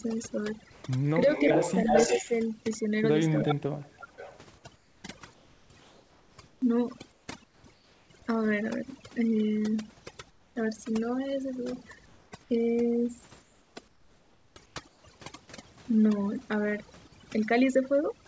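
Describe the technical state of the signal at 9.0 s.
Overdone noise removal is present at 9.0 s and runs through the whole clip. The noise suppressor is set so strongly that frequency bands near its noise estimate are pushed down or switched off, taking quiet speech detail with them. The background drops and breaks up into twinkling specks.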